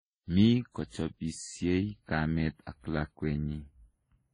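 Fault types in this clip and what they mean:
Channels drifting apart: the inter-channel delay slides to about a tenth of a millisecond, so summed notches sweep slowly, unlike the fixed comb of a constant offset.
Transcoding between lossy codecs: nothing above 11.4 kHz, with layered, mismatched smearing and warble, likely from several low-bitrate codecs in series, unlike the single, uniform texture of one codec.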